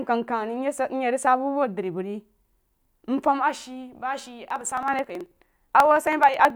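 From 4.45 s to 6.50 s the speech is broken by periodic USB or driver dropouts. Something blocks the audio path every 54 ms, roughly 18 times a second, and each time around 10 ms of signal is skipped outright rather than filled with silence. The joins produce a steady train of ticks, around forty in all, that sound only while speech is present, giving the passage a rapid, evenly spaced chatter.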